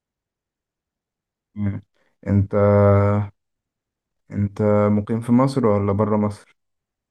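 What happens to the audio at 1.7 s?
Nothing goes wrong at 1.7 s; the audio is intact there.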